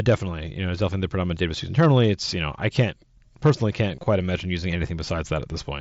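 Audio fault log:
3.96–4.06 s and 5.05 s, concealed Bluetooth headset packet loss: lost audio after "I can't personally can't" and "imagine using" is refilled with copies of the preceding waveform, giving a brief buzzy smear. These copies show as repeated cycles on the waveform and as flat, stripy harmonics on a spectrogram.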